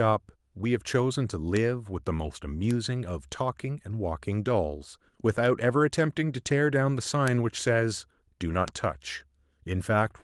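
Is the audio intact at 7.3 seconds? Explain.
No. At 7.28 s the speech carries a bit error spike, a single corrupted sample where one bit of the stored or transmitted value flipped. The level jumps by a power of two for that one sample and snaps straight back, so it is heard as a brief, sharp tick with no relation to the surrounding sound. On a waveform it shows as a lone vertical spike; on a spectrogram, a thin full-height line at 7.28 s.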